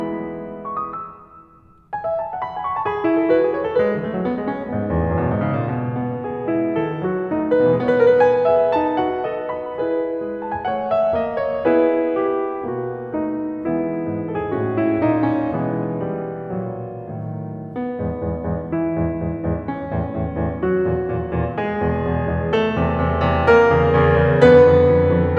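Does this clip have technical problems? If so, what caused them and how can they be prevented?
No, the music in this clip has no audible technical faults. There is no cause to trace and nothing that needs preventing.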